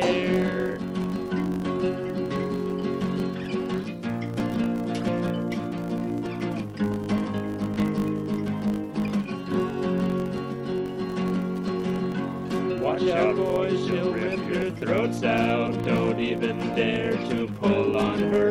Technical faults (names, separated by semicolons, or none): filter restarted on every block; corrupt frame decoded